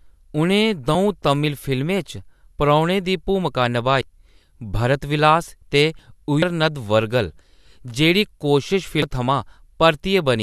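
At 0.94 s a compressed frame is skipped: one 26.1 ms frame goes missing and the speech jumps ahead. At 4.01 s the audio jumps ahead by roughly 150 ms, likely a dropped buffer (overrun) where samples were overwritten before the program collected them. At 5.99 s two frames are skipped, a jump of about 50 ms. The same 150 ms jump recurs at 6.42 s and 9.02 s.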